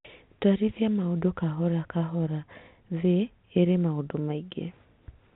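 Speech with nothing technically wrong in it. It carries the narrow sound of G.711 telephone coding, with nothing above 4 kHz and only a faint grain riding under the voice at its own level.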